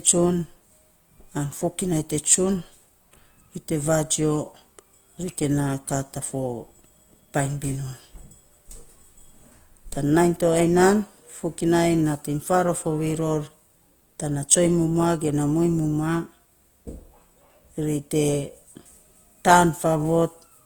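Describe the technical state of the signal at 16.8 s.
At 16.8 s the speech carries a grainy, rough texture, present throughout the clip, whose likely cause is Opus compression in its CELT music mode at a low rate, around 24 kbps. Starved bands are refilled with folded or noise-like energy rather than left empty, so the damage sounds coarse instead of swirly like MP3. Bandwidth stays full, reaching about 20.1 kHz.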